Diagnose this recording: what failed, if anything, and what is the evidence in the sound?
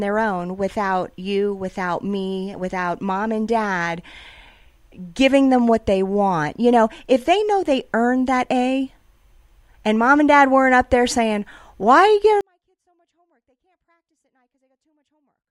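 A sample-format conversion fault, a 24-bit alignment error (too quiet), takes over at 12.41 s and lasts to the end at 15.51 s. The speech falls by about 48 dB in a single step and becomes almost inaudible, yet it stays clean. Samples held in the low 24 bits of a 32-bit word are being read as full 32-bit values. The step is instant, not a ramp, and faint speech remains, which rules out a fade, gain ride or dropout.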